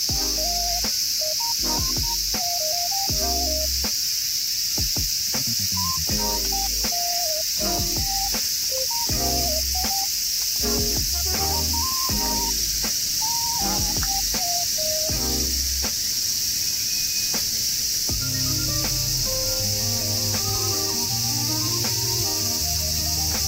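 No technical faults can be heard anywhere in the clip.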